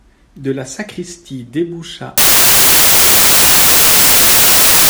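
At 2.18 s, right after "la sacristie déboucha", the speech collapses into loud, harsh broadband noise that runs to the end. That's samples built from the wrong bytes: the reader misassembled each sample, so the jittery low bits now dominate.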